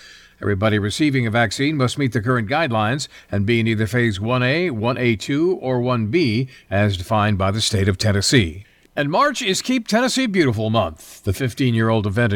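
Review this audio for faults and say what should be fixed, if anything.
Nothing needs fixing, as no technical faults can be heard anywhere in the recording.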